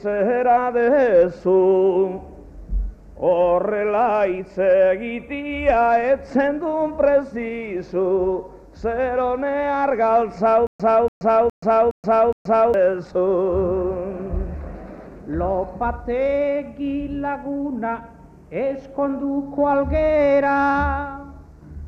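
From 10.67 s to 12.74 s the audio falls into a stutter with silent gaps. A burst of about 287 ms is repeated five times, each copy followed by about 127 ms of digital silence, so it returns at a steady 414 ms period. This is likely a stalled player or stream replaying its last buffered fragment at each retry, and whatever should have played in that span is lost. A waveform shows identical blocks separated by flat silent gaps, and a spectrogram shows repeated patches split by empty vertical bands.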